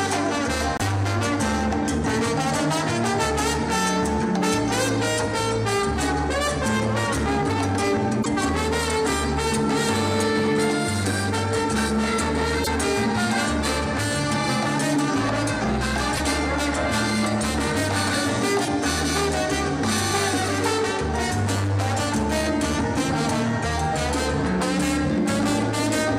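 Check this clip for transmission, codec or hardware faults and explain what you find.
There's one recurring fault, and it sounds like a likely broken MP3 bit reservoir. It hits five times: at 0.77, 8.22, 12.63, 16.16 and 18.64 s, each lasting roughly 40 ms. Each time the audio skips ahead with a brief glitch. That fits a stream where frames around 26 ms long went missing, so the next frame reached back for reservoir data and decoded someone else's bytes for a frame or two.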